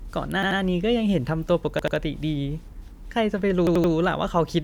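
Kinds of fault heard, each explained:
Repeated buffer: new audio missed its deadline, so the device replayed its last 85 ms block, which fits a 4096-sample buffer. The speech stutters at 0.43, 1.79 and 3.67 s, the chunk playing two, two, then three extra times with hard joins.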